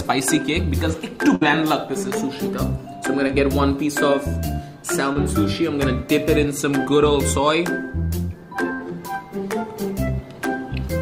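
A burst of packet loss at 1.35 to 1.43 s removes about 60 ms of audio. The receiver stretches the last received sound across the hole and fades it down, so a held buzz or dimming hiss appears before the sound picks up further on, with that stretch gone.

Short concealed packet loss follows at 3.27 to 3.31 s and again at 5.13 to 5.17 s, each about 20 ms that arrived too late. The decoder patches the hole by extending the preceding sound, then crossfades back, leaving a brief smear or wobble.

A second burst of packet loss at 8.73 to 8.81 s drops another 60 ms or so. The same decaying continuation covers it, again heard as a fading buzz or hiss, and the audio then jumps ahead past the missing section.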